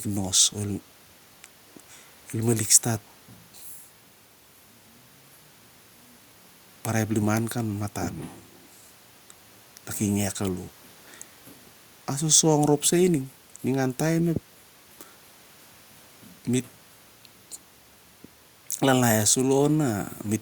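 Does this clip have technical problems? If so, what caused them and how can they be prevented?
No, there are no technical problems to report here.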